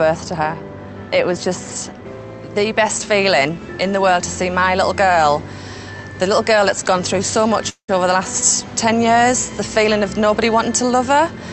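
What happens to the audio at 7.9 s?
At 7.9 s the sound is just coming out of a brief stall. From 7.69 s the last bit of audio is stretched into a fading buzz that dies to near-silence for roughly 90 ms, and then the sound resumes where it left off with nothing skipped. This is a call audio freeze, likely caused by packets arriving late so the jitter buffer ran dry. The receiver filled about 190 ms with concealment, which pushed everything after it later by that amount.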